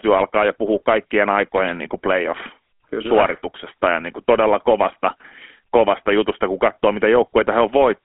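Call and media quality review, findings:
GSM full-rate codec, throughout: plainly buzzy, gravelly speech from sparse pulse excitation through a vocal-tract model; 250 Hz to 3.4 kHz band, nothing above 3.8 kHz, fits 13 kbps.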